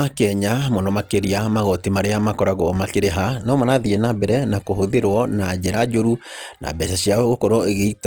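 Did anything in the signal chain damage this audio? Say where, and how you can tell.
No, nothing in this speech recording stood out as damaged when I listened for problems anywhere along the signal chain.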